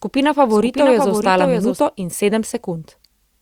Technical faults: doubled audio track

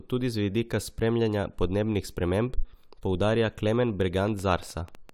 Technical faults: train of clicks

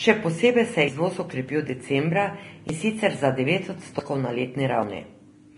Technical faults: Vorbis compression; dropped buffer (overrun)

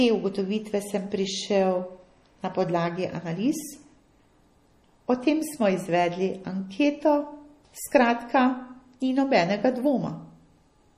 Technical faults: MP3 compression

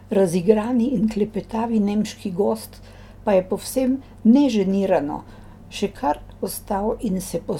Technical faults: none

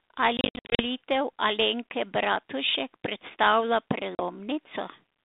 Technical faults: packet loss on an ADPCM call

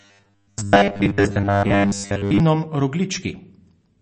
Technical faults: MP3 compression; robotic sound from repeated short buffers

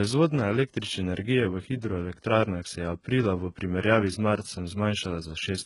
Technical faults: HE-AAC compression

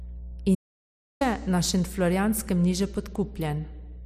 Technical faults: mains hum; audio dropout to silence

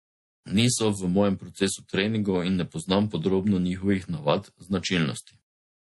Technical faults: MP3 compression

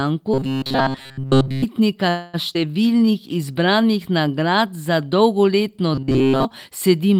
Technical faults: robotic sound from repeated short buffers; call audio freeze; skip ahead; jitter buffer slow-down

